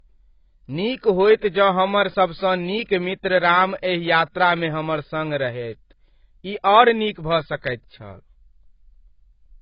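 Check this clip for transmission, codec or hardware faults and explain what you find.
One codec fault runs through the whole speech clip: low-bitrate audio saved at a high bitrate. Nothing is heard above 5.1 kHz, leaving the speech dull. The likely cause is a very low-bitrate encoding, later re-encoded generously, which cannot restore the lost detail.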